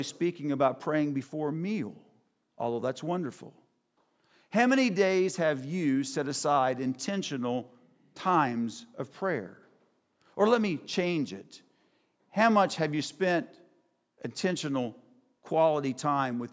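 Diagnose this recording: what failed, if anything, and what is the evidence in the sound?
Nothing failed in this recording, and the sound gives no evidence of any fault.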